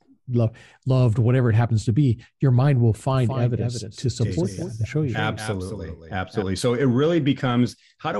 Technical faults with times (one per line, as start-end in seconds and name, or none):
3.14-6.42 doubled audio track